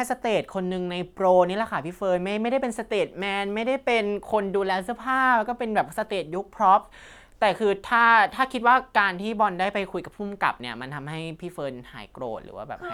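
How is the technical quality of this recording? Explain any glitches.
The technical quality of this recording is sound, with no glitches to explain.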